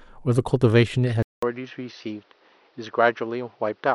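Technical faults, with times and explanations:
1.23 s to the end: input switched to a poorer device. After a gap of about 200 ms, the speech returns duller and boxier, with nothing above 6.2 kHz, roughly 5 dB quieter, and over a new background noise about 35 dB below the voice. The likely cause is the recording input moving mid-take to a narrower-band microphone or a headset call profile. That device has its own tone, level and noise, so the change is abrupt rather than gradual.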